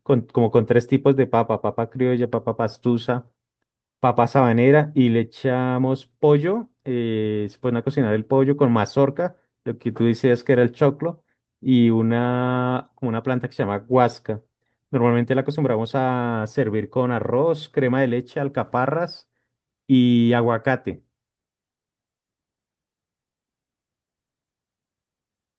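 No faults detected; the speech carries the expected band limit of a call codec, with content stopping around 8 kHz.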